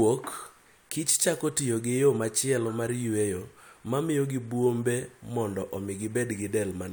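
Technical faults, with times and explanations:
No technical faults can be heard anywhere in the speech; the signal stays continuous from its first moment to its last.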